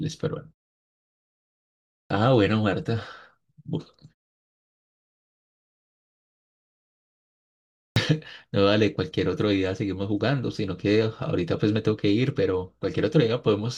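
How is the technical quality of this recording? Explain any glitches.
Two onsets lose their beginning. At 2.06 s and 7.92 s, speech bursts in abruptly out of silence. It is a clipped start after a pause: following pauses of about 1.6 s and 3.9 s, the output device needs roughly 43 ms to wake, swallowing the first sounds.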